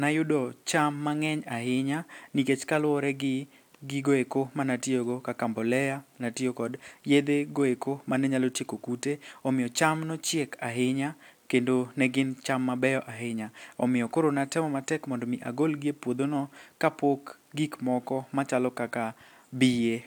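No technical faults occur at any point in the speech, so there is nothing to describe in time order.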